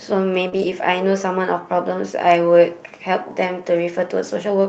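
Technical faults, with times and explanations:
0.49–0.54 s, short concealed packet loss: about 20 ms never reached the decoder, which extended the preceding sound and blended back, giving a brief smear.
0.54–0.72 s, lost packets rebuilt from error correction: about 100 ms, which fits five lost packets, was played from low-bitrate Opus copies, so there is no gap but the sound turns rougher and noisier. A spectrogram shows grainy harmonics with noise filling between them.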